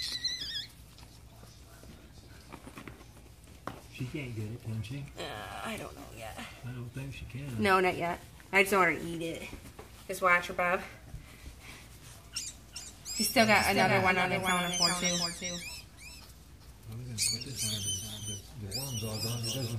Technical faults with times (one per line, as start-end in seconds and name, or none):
12.47-19.78 doubled audio track